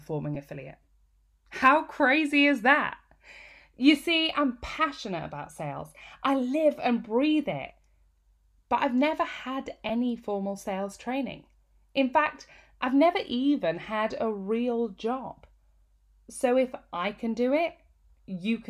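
A brief grainy blip interrupts the speech at 0.35 to 0.37 s, and again at 9.89 s, each about 10 ms long, which fits a single lost frame. These are lost LE Audio frames. When a Bluetooth LE Audio frame fails to arrive, the LC3 decoder fills the gap by repeating the previous spectrum with scrambled phase, so a short noisy smear replaces the missing sound. Around the gaps, the light coding is likely from the LC3 codec itself.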